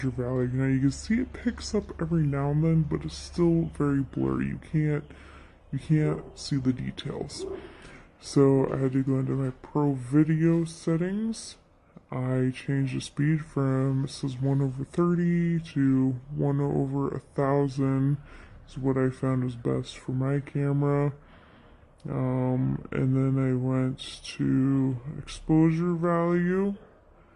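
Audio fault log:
throughout wrong sample rate: playback runs slower than capture, fitting 48 kHz audio played at 32 kHz, so the sound drags at 0.667 speed and drops 7.02 semitones.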